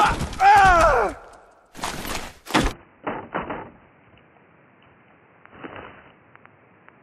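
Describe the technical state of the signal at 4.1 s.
At 4.1 s the sound is band-limited, with nothing above 3 kHz. From 2.72 s onward it turns dull, slightly quieter and noisier. The input likely switched to a poorer device.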